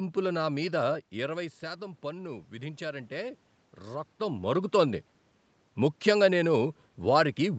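A speech clip in which automatic gain rising sets in just after "నా మీద", running from 1.19 to 4.52 s. The level at the microphone drops by about 11 dB around the talker shifting position near 1 s, and the gain control responds by slowly adding about 4 dB. Unlike a talker simply moving, which changes only the voice, this lift swells the room noise along with the voice, and it creeps over three seconds rather than jumping. Content above 8 kHz is absent, consistent with the call path.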